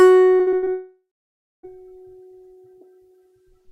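From 0.35 s to 0.68 s the music turns choppy. This is repeated packet loss, giving a robotic sound. Audio went missing five times in quick succession. The longest hole lasts about 60 ms. Each hole is patched by stretching the sound just before it. More than half of this short span is patched sound rather than real music. The result is a stuttering, machine-like texture with pieces gone.

A long network dropout follows at 0.72 s and runs to 1.65 s. About 0.92 s of music is lost. The last sound carries on as a fading buzz or hiss. Then roughly 0.58 s of silence follows. The music returns at 1.65 s, with the missing part simply skipped. The likely cause is a stall in the network stream, with no audio reaching the receiver for almost a second.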